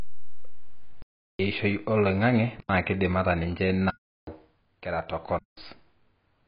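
AAC compression runs through the whole speech clip: nothing survives above about 5.1 kHz, and the sound is dull and smeared with a fizzy edge on sibilants. The likely cause is heavy AAC-LC coding at a bitrate around 16 kbps, quantising coarsely and discarding the top band.

Blocks of digital silence cut in at 1.02 to 1.39 s, 2.60 to 2.69 s, 3.90 to 4.27 s and 5.39 to 5.57 s, lasting roughly 0.37, 0.09, 0.37 and 0.19 s. Each drops straight to silence and back with no fade, as when output buffers go unfilled; the lengths fit 4096- to 16384-sample blocks.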